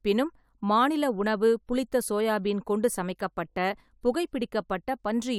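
No technical faults can be heard anywhere in this speech recording. Nothing breaks up, drops out or distorts at any point.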